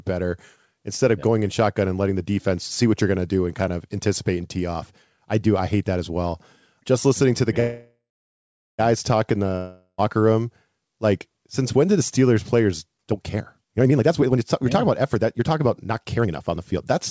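Call audio freeze at 7.60 to 8.81 s: after "listening to the" the sound stretches into a fading buzz, then silence, before "talk in" resumes. This is likely from delayed packets emptying the jitter buffer.

Long network dropout at 9.57 to 10.00 s: after "talk in" a brief fading buzz and short silence replace about 0.42 s of lost speech, and the sound resumes at "room like since when". The likely cause is packets that never arrived.

Jitter buffer speed-up from 12.97 to 16.86 s: the receiver trims pitch-period pieces, roughly a second in total, to shed excess delay. The speech runs at 126% speed at unchanged pitch and sounds hurried. Throughout, the G.722 call codec leaves nothing above 8 kHz.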